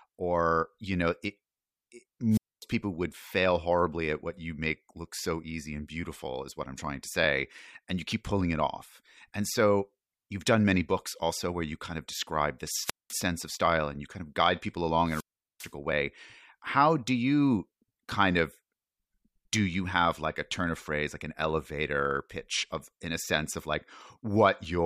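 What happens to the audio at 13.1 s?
At 13.1 s the audio is within a wireless microphone squelch dropout spanning 12.82 to 13.17 s. The radio signal fades, hiss rises briefly, then the receiver's squelch mutes the output for about 0.2 s before the speech resumes.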